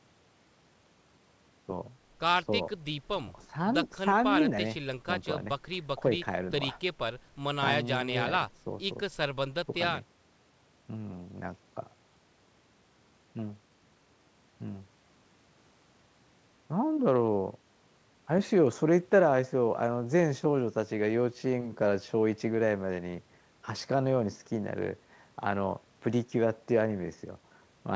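Nothing in this speech recording stood out as a technical problem on listening.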